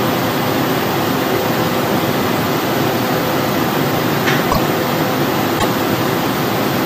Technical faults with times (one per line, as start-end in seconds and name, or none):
4.51-4.58 broken MP3 bit reservoir
5.58-5.65 broken MP3 bit reservoir